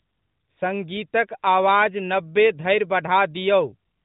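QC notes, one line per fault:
No fault found, so there is no line per fault to log.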